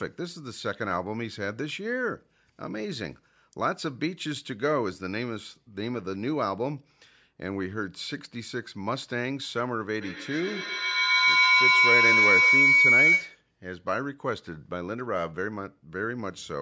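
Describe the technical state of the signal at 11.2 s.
Feedback howl runs from 10.01 to 13.5 s, so 11.2 s falls inside it. Two devices in the same room share the call, and sound leaving one loudspeaker re-enters a microphone louder each pass, so the repeats grow rather than fade. They have narrowed to a tone of roughly 2 kHz, repeating about every tenth of a second, and peak about 9 dB above the speech, well within the call band that ends at 8 kHz.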